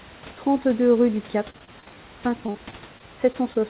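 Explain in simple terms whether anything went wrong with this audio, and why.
Something did go wrong: repeated packet loss (robotic sound), from 1.5 to 1.94 s and again from 2.46 to 3.61 s. Bits of the call audio kept going missing in quick succession, and each hole was patched by stretching the last sound, so the speech turns choppy with pieces missing.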